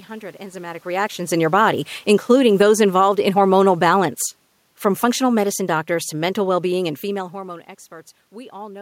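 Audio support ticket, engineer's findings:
Speech and room noise drop together by about 4 dB, 4.94 s to 7.32 s. Automatic gain falling: AGC read input as too loud or its noise as too strong and pulled gain down gradually over 2.4 s, lowering background with the voice. Level shifts near half a second and 7 s are the talker moving.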